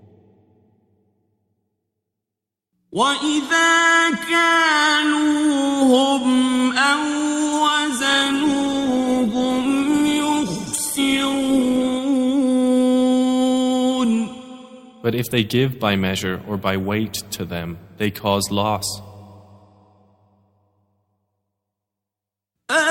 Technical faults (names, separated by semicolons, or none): adaptive stream at a lower bitrate